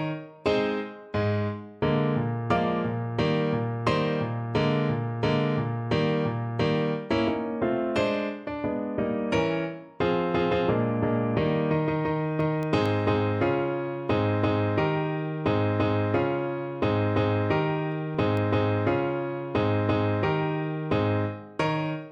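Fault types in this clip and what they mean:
CD scratch ticks: a disc blemish beats error correction once per revolution, so the player patches or mutes short spans. Four ticks at 12.18–12.86 s, three at 17.92–18.37 s, each a millisecond or a few; spectrogram shows thin vertical broadband lines, waveform brief spikes or gaps.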